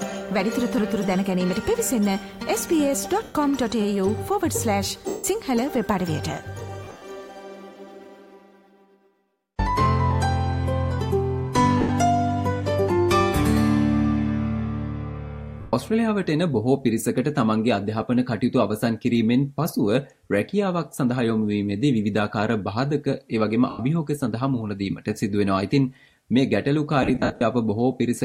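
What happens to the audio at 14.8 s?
Nothing goes wrong at 14.8 s; the audio plays through that moment intact, with no dropout, click or other technical fault.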